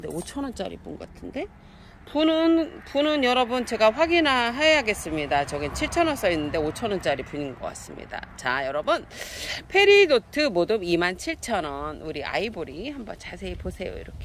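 No technical faults can be heard anywhere in this audio. Nothing in the recording calls for comment.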